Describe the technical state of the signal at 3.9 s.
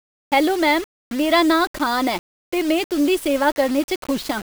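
At 3.9 s the speech carries grainy distortion that runs through the whole clip, likely low bit depth without dither, consistent with about 5-bit rounding. The error sits roughly 20 dB below the signal and moves with it, gritting and sputtering in quiet stretches rather than forming a steady hiss.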